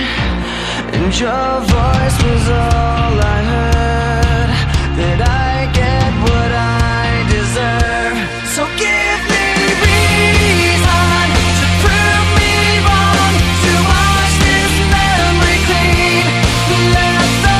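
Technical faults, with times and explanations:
11.90 s, block of digital silence: The sound drops to silence for 1.33 ms and then returns. It cuts out and back in with no fade, so both edges are abrupt steps in the waveform. At this length the two edges merge into a single short tick rather than an audible hole. The length fits a 64-sample block of output that was never filled in time, or that was zeroed after a calculation produced invalid values.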